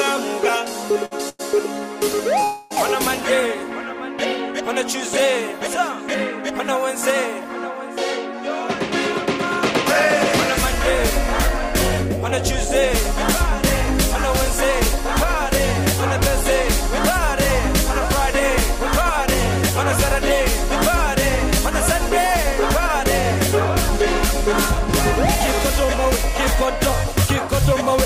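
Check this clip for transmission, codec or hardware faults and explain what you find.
Three network-related faults are present, all early or late in the clip.

From 1.05 s to 2.44 s there are repeated stalls (stutter): three gaps, the longest 100 ms, filled with a continuation of the preceding sound. Packets reached the jitter buffer late, so it ran dry repeatedly. Nothing is lost, but the audio drags and catches.

From 2.44 s to 2.73 s the sound holds for 268 ms as a sustained, fading extension of the last sound rather than silence. This is likely a call audio freeze, with packets held up long enough to empty the buffer. Playback then resumes where it stopped, adding delay instead of dropping material.

From 22.46 s to 27.95 s a jitter buffer speed-up shortens the audio by roughly 40 ms. Short pitch-period segments are cut repeatedly to drain excess buffered audio, so playback runs about 1% fast at unchanged pitch.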